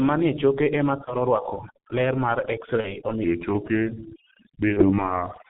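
Overdone noise removal runs through the whole of this speech clip: the suppressor pulls frequency bands toward silence whenever they sit near its noise estimate, so the background becomes a hush sprinkled with twinkling specks and the quieter parts of the voice are eaten away. The G.723.1 codec damage is also present throughout and is heavy. The narrow, muffled, hoarse sound with smeared consonants fits this low-rate telephony coder at around 6.3 kbit/s, which discards everything above 4 kHz and tracks the voice only coarsely in 30 ms frames. VoIP packet loss concealed by the speech codec appears at 1.04 to 1.15 s, 2.81 to 2.96 s and 4.73 to 5.05 s. Each dropout sounds like a single lost 30 ms frame that the decoder bridged by stretching its last pitch and filter into a fading sound, with the voice staying weak and distorted for a while afterward. A section at the wrong speed runs from 3.24 s to the end, playing at 0.829 times normal speed, so the voice drops roughly three semitones and drags. 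This is likely caused by that stretch being resampled against the wrong clock.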